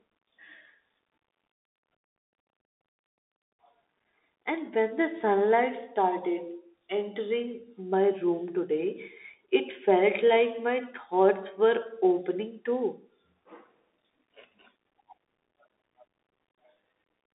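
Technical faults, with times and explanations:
Throughout, Bluetooth CVSD headset codec: the speech has passed through a narrowband headset link that encodes each sample as a single up-or-down bit with an adapting step size, which fits a 64 kbps stream. The line passes roughly 250 Hz to 3.7 kHz, and nothing above 3.8 kHz survives, so the voice sounds thin and boxed-in. Where the step cannot keep pace with fast, loud changes, plainly audible grainy distortion and roughened sibilants appear.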